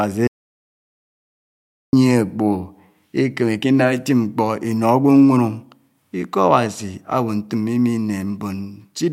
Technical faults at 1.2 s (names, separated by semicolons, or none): audio dropout to silence